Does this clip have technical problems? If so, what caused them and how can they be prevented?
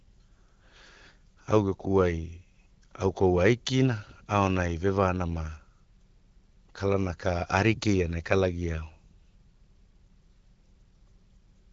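No, this clip has no technical problems.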